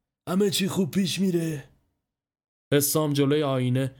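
No technical faults occur at any point in the recording.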